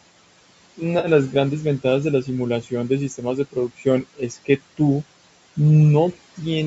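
AAC frame loss with concealment hits this speech recording at 0.99 to 1.08 s: about 50 ms of coded audio went missing, and the decoder covered the gap by reusing the last good spectrum, leaving a brief smeared, noisy patch. Speech cut by the noise suppressor follows at 2.62 to 2.72 s (about 12 dB down), 3.52 to 3.86 s (about 14 dB) and 4.03 to 4.60 s (about 19 dB), where the suppressor mistook speech for background and pulled it down, so those stretches sound swallowed and faint.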